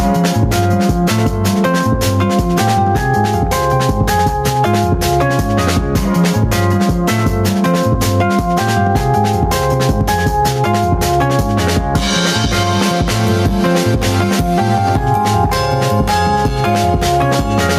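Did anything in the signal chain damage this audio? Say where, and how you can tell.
Yes. Throughout the clip the level pumps by around 5 dB, with loud and soft parts squashed together. This is gain pumping, likely from input gain set far too high, with a fast limiter clamping each peak.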